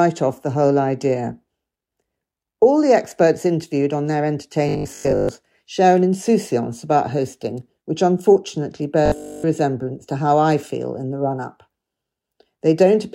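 From 4.69 to 5.29 s and again from 9.06 to 9.46 s the sound turns into a rigid, metallic 50 Hz buzz, robotic sound from repeated short buffers. This is likely a 20 ms buffer replayed over most of the first stretch and all of the second.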